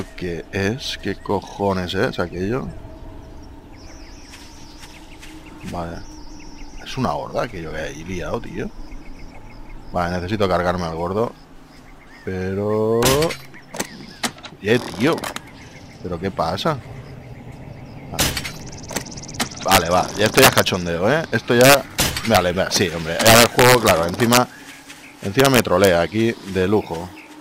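Integer overflow breaks out on the loudest peaks at 19.72–19.78, 20.26–20.60, 21.61–21.75, 22.35–22.37, 23.26–23.91, 24.33–24.37 and 25.40–25.87 s. Where the level runs about 2 dB past full scale, the sample value wraps around to the opposite extreme instead of being held at the limit. Each wrapped peak becomes a full-range jump, heard as harsh, violent cracks far sharper than ordinary clipping.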